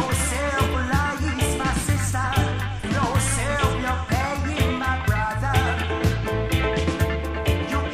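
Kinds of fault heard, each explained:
Damaged data in a compressed stream: bad bytes in the encoded stream make the decoder misread a frame, lose sync and hunt for the next valid header, leaving a brief synthetic chirp or squawk. Here it strikes three times, at 0.70 to 0.75 s, 2.79 to 2.84 s and 7.81 to 7.86 s, each about 50 ms.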